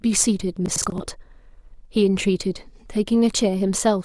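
From 0.66 to 1.0 s a gritty, tearing crackle rides on the speech. This is processor overload crackle: a handful of buffers, which fits buffers of around 20 ms, missed their deadlines and replayed old audio with hard edges. Unlike a single dropout, the skips cluster into one burst.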